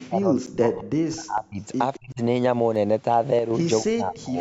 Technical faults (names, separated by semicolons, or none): speech suppressed in double talk; block of digital silence; echo leak